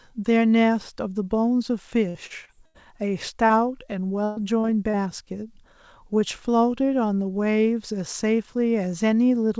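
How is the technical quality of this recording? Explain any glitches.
The recording is damaged by packet loss on a call link at several points between about 2 and 5 seconds. Nothing comes through above 8 kHz, which fits a wideband call codec such as G.722 at 64 kbps.

From 2.09 to 2.77 s there is repeated packet loss, producing a robotic sound. Four separate gaps open in quick succession, the longest 83 ms, and about 210 ms of audio goes missing. The receiver patches each hole by extending the preceding sound, so roughly 30 percent of that stretch is synthetic. Because the holes come so close together, the speech turns choppy and machine-like, with fragments dropped between the patched pieces.

Short concealed packet loss occurs three times: 3.46 to 3.52 s, 4.60 to 4.66 s and 4.90 to 4.96 s. Each time about 30 ms never arrives in time for playback. The decoder fills the hole by continuing the last sound, pitched if it was voiced and as shaped noise if not, then crossfades back into the real signal. 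Each one is heard as a brief smear or wobble, and a short consonant there can disappear.

From 4.24 to 4.39 s there is a burst of packet loss. A run of about 120 ms is lost as a block. The receiver bridges the entire gap with no silence, stretching the last sound and fading it as the gap continues. A voiced sound therefore becomes a held, dwindling buzz, or an unvoiced one becomes a fading hiss. The speech then jumps ahead, and the 120 ms in between is gone.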